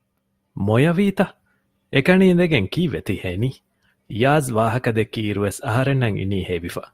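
A speech recording whose sound abruptly drops in quality at 1.03 s, with more codec artefacts and no gap, lasting to the end. This is an adaptive stream at a lower bitrate, consistent with a switch from about 64 to 32 kbit/s Opus.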